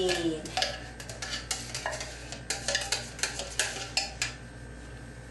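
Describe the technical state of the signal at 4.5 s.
Around 4.5 s the signal is intact, with no technical fault audible at that point.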